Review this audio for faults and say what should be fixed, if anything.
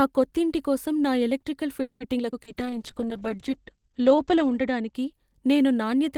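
Right after "కొత్తింటి కోసం నా ఎలక్ట్రికల్", at 1.81–2.03 s, there's a call audio freeze: a fading buzz fills about 190 ms, then the speech resumes with nothing lost, likely from delayed packets draining the jitter buffer.

Two skip ahead jumps follow at 2.18 s and 2.31 s. Each drops something like 70 ms and splices the two sides together almost directly, as the buffer sheds the backlog.

At 2.44–2.49 s there's a short concealed packet loss: 60 ms never arrived, and the patched-over 20 ms gives a brief smear.

From 2.49 to 5.00 s a call bitrate drop takes the encoder from 32 to 10 kbps, cutting bandwidth from 20 kHz to 8 kHz. It sits at the lowest rate for 1.96 s, so the speech sounds muffled and rough.

A jitter buffer slow-down overlaps it from 2.54 to 4.20 s. Repeated pitch periods add 132 ms, so the speech runs at 92% speed with the pitch unchanged.

To prevent this, fix the network path's delay spikes and congestion, and give the jitter buffer and bandwidth estimator a bit more headroom.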